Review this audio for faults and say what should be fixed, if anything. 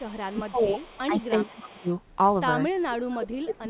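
Echo leak at 0.00–0.41 s, 0.57–1.01 s and 1.57–1.73 s: a faint delayed copy of the voice trails the speech by 355 ms, sitting roughly 25 to 30 dB below it. The likely cause is a far end playing the call on a loudspeaker, where the echo canceller left some of the loudspeaker signal in its microphone pickup and sent it back. A better-tuned echo canceller, or a headset at that end, would stop the leak.

Speech suppressed in double talk at 0.31–0.82 s, 1.07–1.20 s, 1.38–1.88 s, and from 2.88 s to the end: the voice dips while the other side is also active. The shallowest drop is about 10 dB and the deepest roughly 30 dB, leaving the speech thinned or broken into pieces. The likely cause is an echo canceller that could not tell its own talker from the loudspeaker echo and turned both down together. Making the echo canceller more tolerant of double talk, so it attenuates less when both sides speak, would prevent these drops.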